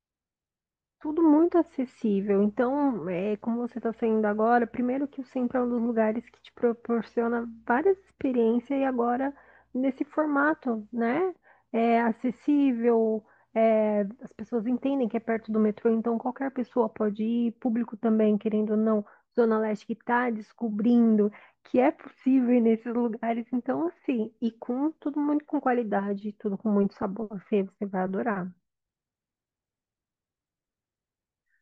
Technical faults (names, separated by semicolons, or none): none